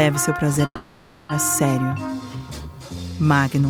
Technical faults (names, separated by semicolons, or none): call audio freeze